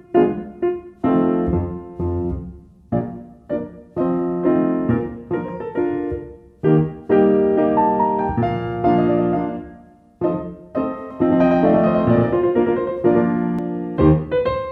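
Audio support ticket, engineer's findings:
Doubled audio track, 11.11 to 13.59 s. Sound slaps back as a second copy about a tenth of a second late, roughly equal in level, full-band, no decay or room colour, cutting in and out abruptly. Likely a second, slower capture path mixed in alongside the direct feed.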